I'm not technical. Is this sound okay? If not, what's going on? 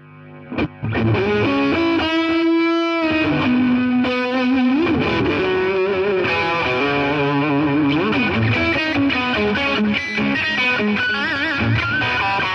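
No. At 0.45 to 0.85, 5.01 to 5.39, 8.76 to 9.16 and 10.35 to 10.47 seconds, the sound briefly flutters and garbles. These are frames out of order: two short neighbouring pieces of audio, about a fifth of a second each (much shorter in the last one), play swapped.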